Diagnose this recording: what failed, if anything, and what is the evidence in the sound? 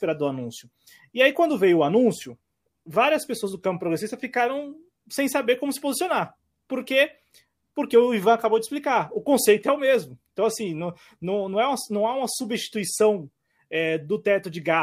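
Nothing in this recording points to a failure at any stage, and the speech comes across with no audible fault anywhere in it.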